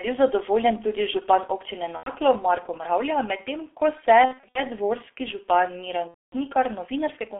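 Low-bitrate G.723.1 coding at about 6.3 kbit/s, squeezed into a 300 Hz to 3.5 kHz line band, runs throughout, leaving the speech heavily muffled and hoarse with smeared consonants. VoIP packet loss concealed by the speech codec then strikes three times. At 1.97 to 2.12 s, about 90 ms goes missing, consistent with three 30 ms frames. From 4.26 to 4.63 s, losses scatter, with the longest gap 60 ms. At 6.08 to 6.36 s, roughly 240 ms drops. Each time, the decoder stretches the last sound into a buzzy tone or coloured noise that fades.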